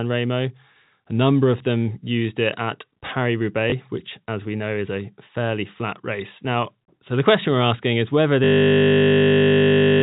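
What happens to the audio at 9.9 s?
At 9.9 s the clip is inside a system hang loop that begins at 8.44 s and runs to the end. The system froze while the sound hardware kept replaying the same 20 ms stretch of its ring buffer, repeating it 79 times. Because that segment is so short, the repetition fuses into a steady buzz at 50 Hz rather than a stutter, and no new audio comes through until the clip ends.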